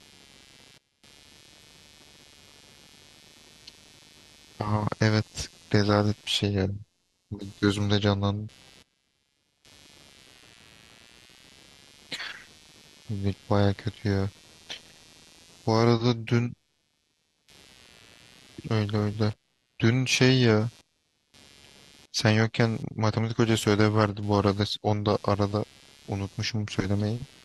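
From start to finish, the speech carries computer activity noise: a faint buzzing, chirping texture sitting roughly 30 dB below the voice and pulsing at around 150 Hz. Changing load on the processor, graphics card or mouse disturbs the ground the audio circuit shares with the computer, and that disturbance leaks into the signal. Unlike mains hum, which holds a steady pitch and level, this noise shifts and flickers with what the computer is doing, independent of the speech itself.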